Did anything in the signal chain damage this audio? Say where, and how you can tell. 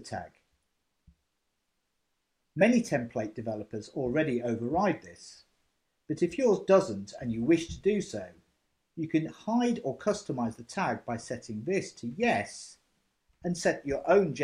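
No, nothing along the signal chain has damaged this audio. Listening across the whole clip, no stage from capture through to playback leaves an audible mark on the sound.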